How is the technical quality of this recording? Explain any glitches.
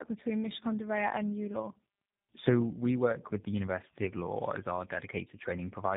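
Quality is poor throughout, with tandem speech coding running the whole length of the speech. Nothing reaches above about 3.7 kHz, and the sound has a gritty, warbling, hollow character that stacks on itself. Two low-rate speech coders worked in sequence, which fits a GSM full-rate stage feeding a G.729A stage, with plain telephone-band transport in between. The second coder re-models the first one's errors instead of the original voice. What separates this from a single narrowband codec or simple band-limiting is that the roughness and swirl are compounded rather than merely dull.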